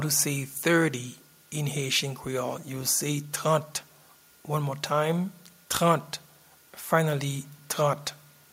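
At 7.71 to 7.73 s, near the end of the clip, a single loud pop cuts through the audio: one sharp, brief transient lasting about 20 ms and peaking a few decibels above the surrounding sound, which carries on underneath without interruption. The cause is likely a sudden voltage step or pulse entering the signal chain, such as from a switch, a connector being disturbed, a static discharge or a momentary driver glitch.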